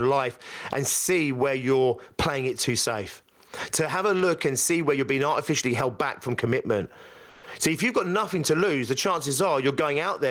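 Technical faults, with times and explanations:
Throughout, gain pumping: the gain is pulled down on each loud sound, with a swing of around 20 dB. The likely cause is input gain set far too high and a fast limiter repeatedly clamping it, flattening loud and soft parts together.
7.29 to 7.43 s, comfort noise in place of the background: for 140 ms the real background, about 27 dB below the loud parts, gives way to steady, smoother noise about 3 dB quieter. This likely comes from discontinuous transmission, with the receiver synthesising filler noise during a detected pause.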